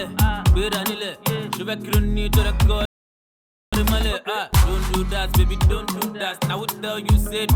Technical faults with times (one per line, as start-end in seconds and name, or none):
2.85-3.73 rebuffering stall